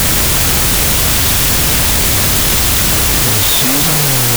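Throughout, a wrong sample width: 32-bit float data read as 16-bit integers turn mostly into loud noise, with the speech buried and playing at half speed and lower pitch.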